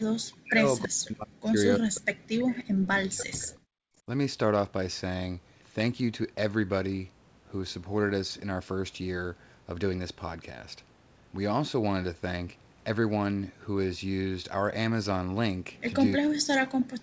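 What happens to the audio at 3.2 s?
Between 2.72 and 3.69 s the speech sinks by around 40 dB, likely speech suppressed in double talk: the echo canceller ducks the talker during overlap, so the voice dips.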